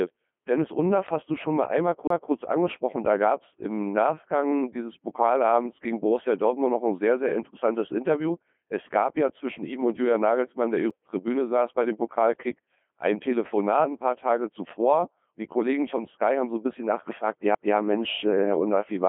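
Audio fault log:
Throughout: Codec 2 vocoder. The speech sounds robotic and buzzy, with heavy codec damage and nothing above 3.5 kHz, confined to a 200 to 3400 Hz line band. The decoder keeps only pitch, voicing, energy and a coarse spectral envelope, then rebuilds each frame from synthetic sine waves, so the original waveform is lost. The sound points to a low-rate mode that fits about 2.4 kbit/s.
2.07 to 2.10 s, 10.9 s and 17.55 s: CD skip. Each is a tick or short gap followed by a jump in the speech, as the laser leapt to a different turn of the disc's spiral and playback resumed elsewhere. The player mutes briefly while it relocks: roughly 30 ms at the first skip and only a few milliseconds at the other two. This produces the abrupt break rather than a smooth fade.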